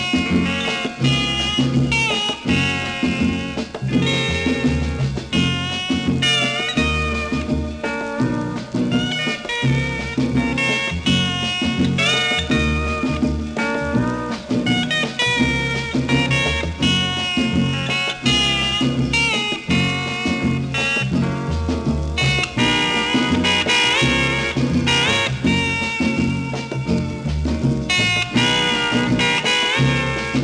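No technical faults can be heard anywhere in the recording. Nothing in the audio calls for a timestamp or a fix.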